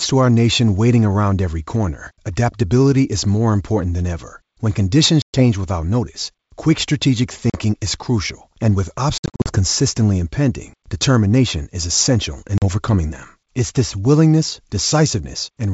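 Packet loss on an ADPCM call strikes four times. About 120 ms drops out at 5.22 s, before "without notice quick strategic", and 40 ms at 7.50 s. From 9.18 to 9.53 s, after "is crucial and with", 200 ms goes in scattered runs of up to 60 ms. Another 40 ms vanishes at 12.58 s, after "determination is essential in". Silence fills each gap, cutting hard-edged holes in the 64 kbit/s G.722 wideband sound. The decoder's predictor and step size then fall out of step with the sender's, so the speech returns slightly distorted before settling.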